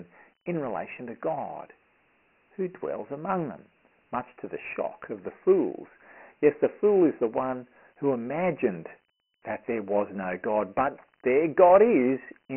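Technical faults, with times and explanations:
Throughout, Dialogic VOX ADPCM: the speech was stored as 4-bit adaptive differential samples at a low rate, which fits 6,000 samples a second and about 24 kbps. Nothing survives above 3.1 kHz, within a phone-line band of 250 Hz to 3.7 kHz, so the speech sounds muffled and boxy. The coarse 4-bit step sizes cannot track the waveform closely, leaving heavy gritty hiss that rides along with the speech.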